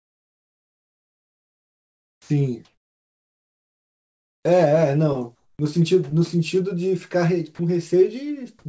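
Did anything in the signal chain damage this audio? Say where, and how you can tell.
Yes. At the call-processing stage, comfort noise in place of the background fills 0 to 2.30 s, 2.65 to 4.45 s and 5.35 to 5.59 s. These gaps were likely caused by discontinuous transmission. On a spectrogram the real background, about 52 to 56 dB below the loudest speech, becomes a smooth, textureless band ending at 8 kHz like the rest of the call audio. It sits about 10 dB lower in the first gap and about 2 dB and 5 dB higher in the others.

The speech entering at 2.30 s has its onset clipped by the voice detector. Its first 100 ms, from 2.20 s, were replaced with synthetic noise, likely because the detector reacted late. In the waveform the speech jumps to full amplitude from flat noise with no rising edge, and the spectrogram shows a hard vertical start.

Around 7.55 s there is sound dropped by the voice detector. 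For 40 ms the speech gives way to steady noise, and about 30 ms of actual sound is lost, likely because the detector briefly treated the sound as background. On a spectrogram this appears as a narrow notch of uniform noise cutting through the harmonics.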